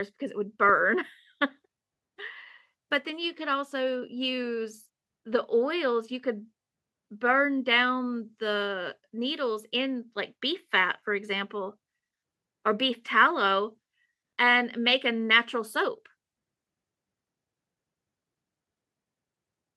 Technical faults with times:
none

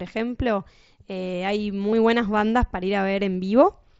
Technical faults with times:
1.91 concealed Bluetooth headset packet loss

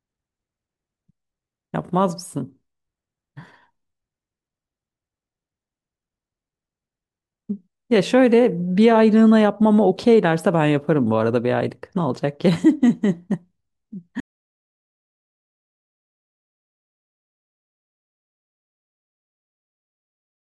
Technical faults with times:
14.20-20.46 audio dropout to silence

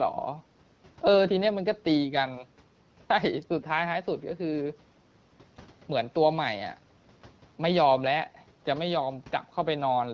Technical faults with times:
none

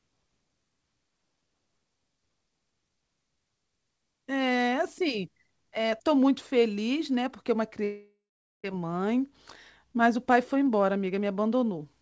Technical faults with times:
7.84-8.65 long network dropout

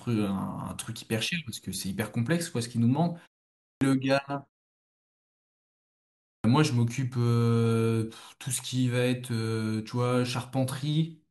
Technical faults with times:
3.61-3.81 clipped start after a pause
6.22-6.44 clipped start after a pause

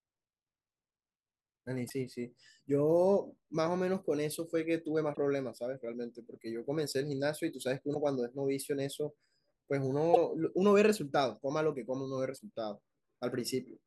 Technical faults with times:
1.86-1.91 damaged data in a compressed stream
5.12-5.17 damaged data in a compressed stream
7.91-7.96 damaged data in a compressed stream
10.12-10.17 damaged data in a compressed stream
12.35-12.40 damaged data in a compressed stream

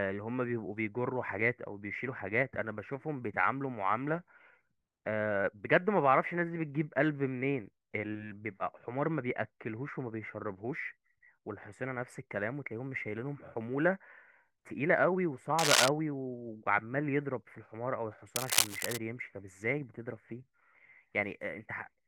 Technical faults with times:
15.59-15.88 cable scratch noise
18.35-18.98 cable scratch noise

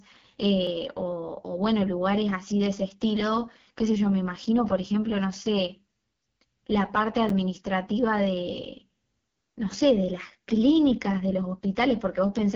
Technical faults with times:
0.00-12.56 AMR wideband (HD Voice) codec
0.67 block of digital silence
4.45 block of digital silence
7.29 block of digital silence

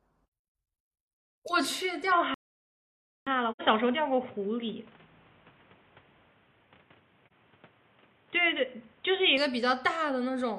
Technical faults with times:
2.12-9.37 input switched to a poorer device
2.34-3.27 playback stall
3.51-3.61 AAC frame loss with muting
7.27-7.32 AAC frame loss with muting

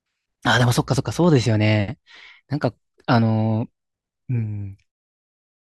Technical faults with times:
none

